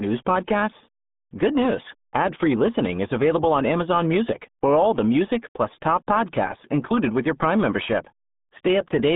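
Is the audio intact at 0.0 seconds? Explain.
No. From 0.0 s, and throughout, the speech sounds muffled and gargly, squeezed into a narrow telephone-like band of roughly 150 Hz to 3.6 kHz, with nothing at all above 3.8 kHz. This is the RealAudio 14.4 codec at work, a dial-up-era speech coder whose very low bitrate, fitting about 8 kbit/s, forces it to discard the high band and model the rest crudely, leaving heavy codec damage on every syllable.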